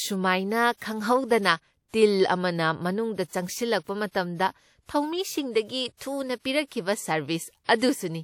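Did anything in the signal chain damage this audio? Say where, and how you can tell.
Yes, codec pre-echo. Short hiss precedes attacks at 0.77 s and 5.97 s, smearing them by about 45 and 41 ms. Block-spread quantisation noise leaks ahead.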